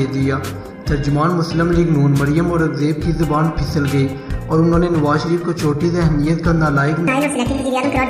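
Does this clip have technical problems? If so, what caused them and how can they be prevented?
Yes. From 7.08 s to the end at 8.09 s there is a section at the wrong speed: the final second plays about 1.72 times faster than it should, so it sounds hurried and its pitch jumps up by roughly ten semitones at the same moment. Because speed and pitch shift together and abruptly, the likely cause is that this last segment was played back or rendered against the wrong clock rate, not deliberately pitch-shifted. To prevent it, confirm that every segment is conformed to the project's sample rate and clock before export.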